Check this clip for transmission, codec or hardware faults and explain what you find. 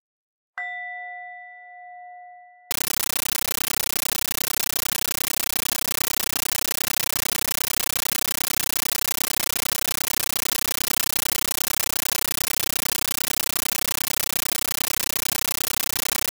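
One fault is present: a compressed stream played as audio. From 2.71 s to the end, an undecoded AC-3 bitstream, consistent with 640 kbps, is treated as samples. Each frame becomes a 13.3 ms noise burst then silence, 31.25 times a second, replacing the sound with loud, chattering static.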